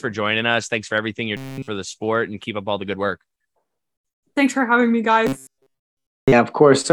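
From 1.37 to 1.68 s, and again from 5.27 to 6.32 s, the speech turns into a rigid, metallic buzz pitched at 134 Hz that only loosely tracks the syllables. This is robotic sound from repeated short buffers, likely caused by audio arriving too late. The playback fills each gap by looping a fragment of about 7.5 ms, which sets that fixed pitch, and nearly all the real audio in both stretches is skipped.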